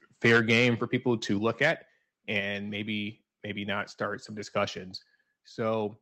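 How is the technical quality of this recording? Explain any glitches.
The recording has a few noticeable problems, mostly near the start of the speech.

From 0.24 to 0.68 s and again from 1.61 to 1.71 s there's microphone overload. The input was likely set too hot, pushing peaks about 8 dB and about 4 dB past the converter's limit, so their tops get sheared off into a harsh crackle.

There are microphone volume step-downs at 0.37 s (about 3 dB), 1.38 s and 2.4 s (about 5 dB each). The call software likely reacted to the loud input, and each time the whole level drops abruptly.

Sample clock jitter runs throughout as a faint roughness, well below the speech, that grows on louder and brighter sounds. An unsteady converter clock is timing the samples slightly off.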